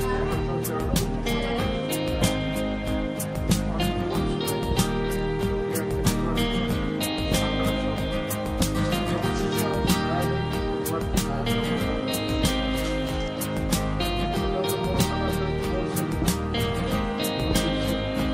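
From the start the whole clip carries the sound of MP2 compression, most likely MPEG Layer II coding at a low rate in the region of 80 kbps. The top end is dull because the encoder has switched off upper sub-bands for lack of bits, and the bands that remain are coarsely quantised, giving a granular, gurgling texture. Unlike MP3 or AAC swirl, this roughness sits in fixed bands that flicker on and off.

At 16.94 s there is a single brief burst of DAB burbling: a few watery blips, as if two coded frames were hit. A few bit errors, at a rate well under a tenth of a percent, slipped past error correction and corrupted sample values, putting short blips of noise into single sub-bands. Unlike a dropout or a digital click, the sound keeps going but briefly picks up a few watery blips.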